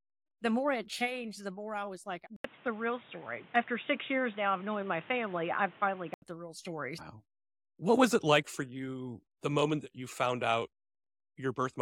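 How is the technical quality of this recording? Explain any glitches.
The recording has one clear glitch: the input switched to a poorer device from 2.36 s to 6.22 s. An 80 ms gap marks the change, and then the speech turns dull, with nothing above 3.8 kHz, over a new background noise roughly 30 dB below the speech. The loudness barely shifts. The brief dropout and the different noise floor point to a likely hardware change rather than a simple filter or codec bandwidth drop. Full clarity returns at 6.22 s.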